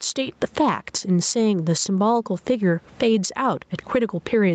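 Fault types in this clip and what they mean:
gain pumping: The input gain was likely set far too high, so a fast limiter keeps clamping down on each loud syllable. The gain swings by around 15 dB, leaving the speech flattened and squashed.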